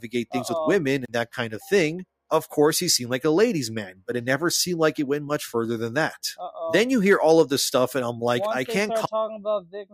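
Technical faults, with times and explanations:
9.62–9.93 s, sound cut by the noise suppressor: in the last third of a second of the clip, the noise suppressor mistook part of the sound for background noise and turned it down harder than everything around it. The level drops by about 18 dB at its deepest, and the affected stretches add up to roughly a fifth of a second. The ending therefore sounds sunk in level.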